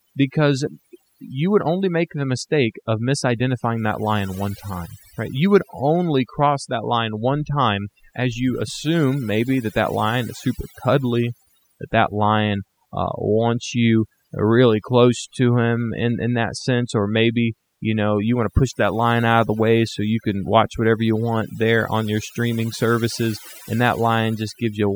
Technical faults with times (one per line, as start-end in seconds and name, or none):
0.00-24.95 overdone noise removal